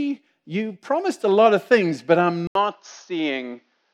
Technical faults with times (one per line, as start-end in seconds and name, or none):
2.47-3.94 input switched to a poorer device